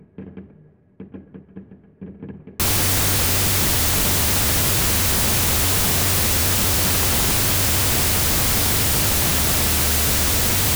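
From 2.6 s to the end, a wrong sample width fault: samples are read at a different byte size than they were written, which fits 32-bit float data decoded as 16-bit integers. The everyday sound turns into loud noise with the original buried beneath it, playing at half speed, an octave low.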